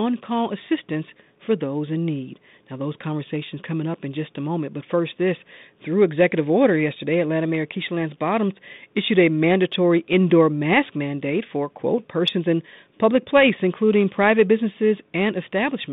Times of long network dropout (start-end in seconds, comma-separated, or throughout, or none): none